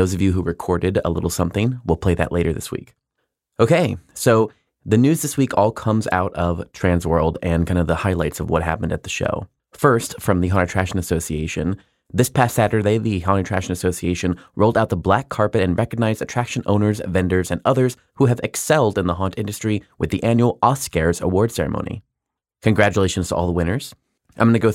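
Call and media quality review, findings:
No faults found in this speech recording. Nothing to attribute to any component in the capture, transport or playback chain.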